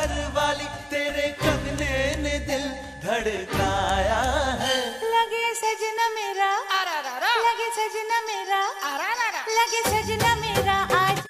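Throughout, a thin whistle wavers between 1.71 and 1.73 kHz, roughly 20 dB below the sound: a switching supply whistle from a power supply cycling audibly.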